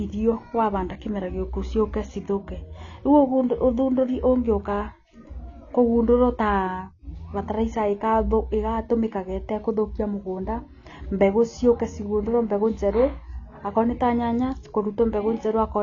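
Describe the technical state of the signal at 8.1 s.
At 8.1 s the speech sits under the same damage that runs through the whole clip, most likely AAC compression. Nothing is present above 6.9 kHz, so sibilants sound dull and fizzy, and sustained sounds carry a warble. The codec quantises frequency lines coarsely and zeroes out the top band, which fits a low bitrate around 24 kbps. On a spectrogram the energy stops at a hard ceiling near 6.9 kHz.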